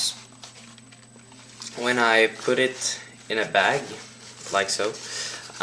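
No technical faults can be heard anywhere in the clip. Nothing breaks up, drops out or distorts at any point.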